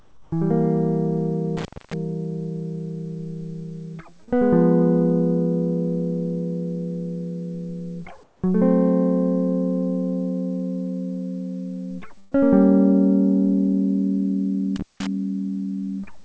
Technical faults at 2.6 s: none

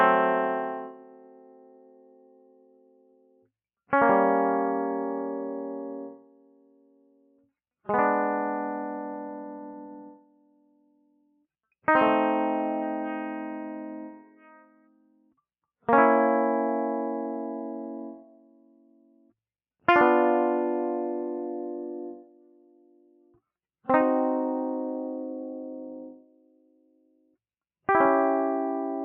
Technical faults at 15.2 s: noise suppressor applied to music or sounds; sound cut by the noise suppressor

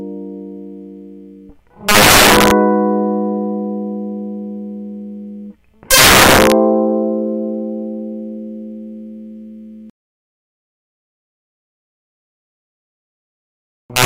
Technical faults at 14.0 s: integer overflow

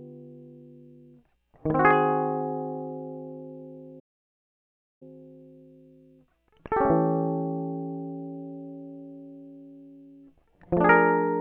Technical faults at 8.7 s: none

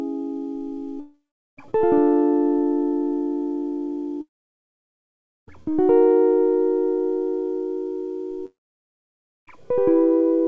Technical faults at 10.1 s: none

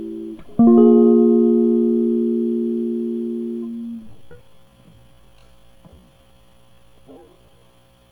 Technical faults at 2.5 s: none

